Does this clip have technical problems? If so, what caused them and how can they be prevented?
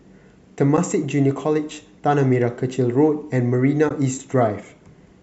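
Yes. AAC frame loss with muting occurs at 0.77 s and from 3.89 to 3.91 s. Zeroed frames fade in and out, leaving soft-edged holes rather than a dropout's hard click. Their 10 ms steps fit the short frames of the likely low-delay AAC coding. Forward error correction, or a decoder that conceals lost frames instead of muting them, would prevent it.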